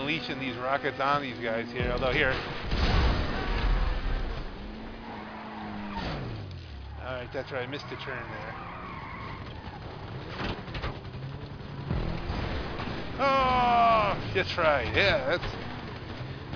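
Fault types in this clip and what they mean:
No technical faults can be heard anywhere in this audio.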